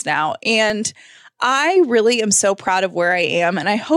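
At 2.68 s, just after "I really am so", there is an overlap between stream segments: about 12 ms of speech was trimmed where two segments' timestamps collided, so the waveform jumps forward. Unlike a dropout, no silent gap appears; the sound simply skips ahead.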